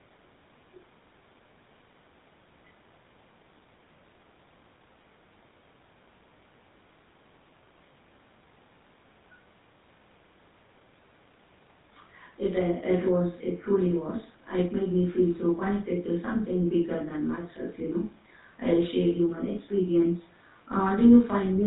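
A speech recording that has passed through the GSM full-rate codec for its whole length, with plainly audible damage from start to finish. The voice has the buzzy, gravelly texture of this early mobile-phone coder, which rebuilds speech from a vocal-tract filter driven by a sparse, regularly spaced pulse train. Nothing survives above about 4 kHz, so the sound is dull and band-limited, and the roughness fits a bitrate around 13 kbps.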